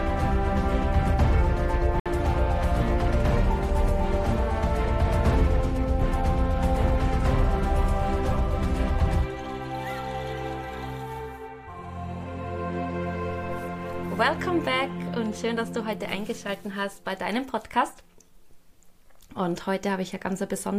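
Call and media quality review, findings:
Likely Bluetooth stall: link interference delayed packets, headphone buffer ran dry. Audio drops to silence at 2.00–2.06 s, about 60 ms, then resumes.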